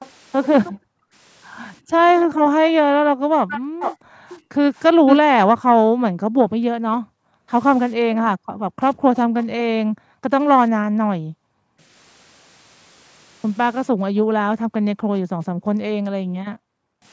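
At 0.0 to 0.1 s and again from 3.5 to 5.17 s, a delayed copy of the speech returns, likely an echo leak. A loudspeaker's echo canceller missed some pickup. The first is faint at 346 ms. The second is strong at 449 ms. Background gated by the echo canceller appears at 0.72 to 1.14 s, 1.8 to 11.79 s and 14.14 to 17.03 s. The room sound drops by about 40 dB, then returns.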